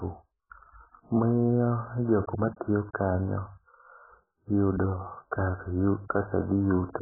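AAC compression damage runs through the whole of this short speech clip: nothing survives above 1.8 kHz, leaving the audio dull and smeared, with warbling on sustained sounds. This is likely heavy AAC-LC coding at a very low bitrate, around 8 kbps, where the encoder discards the upper spectrum.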